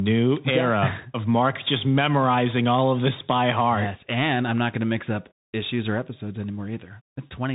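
Throughout, a Bluetooth CVSD headset codec limits the speech. Nothing above 3.8 kHz passes. Its one-bit slope tracking leaves scratchy s sounds and granular hiss.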